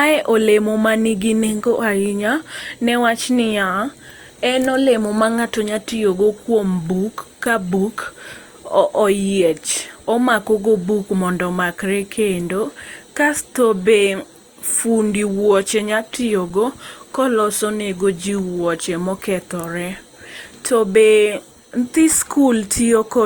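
An underrun with held sample occurs at 7.45 s, between "tiyo go kuom buk" and "ka buk", and again at 16.50 s. Each time the output buffer ran dry for 5.8 ms, which fits a 256-sample gap, and the converter froze on its last value. The speech flattens to a brief held level and resumes after around 5 ms of live audio was skipped.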